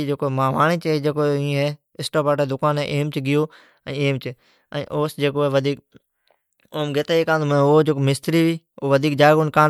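No technical faults are audible.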